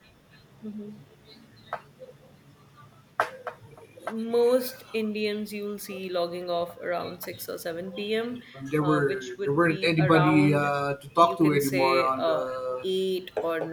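From 8.42 to 10.27 s the input likely switched to a poorer device with a narrower band. The speech turns dull, drops roughly 5 dB, and gains a faint new noise floor, with no gap at the switch.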